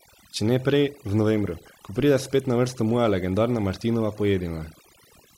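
From start to finish there's overdone noise removal: the reducer was set so hard it gated out quiet bands, leaving twinkly near-silence.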